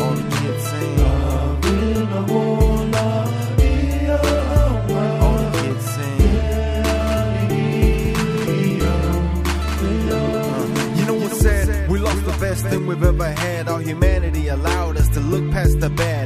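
From 6.72 s to 12.78 s the sound is doubled. A second full-band copy trails about a fifth of a second behind, roughly 5 dB quieter. It has no decay or room colour. It cuts in and out abruptly. This is likely a doubled audio track.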